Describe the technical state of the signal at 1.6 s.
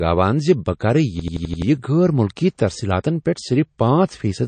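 At 1.6 s the signal is near the end of a system hang loop running from 1.20 to 1.62 s. The same 85 ms block repeats five times at 11.7 Hz, a machine-gun stutter consistent with a 4096-sample ring buffer, replacing roughly 0.4 s of speech. Throughout the clip there is also plainly audible watery, swirly damage with nothing above 9 kHz, likely from MP3 compression at a low bitrate.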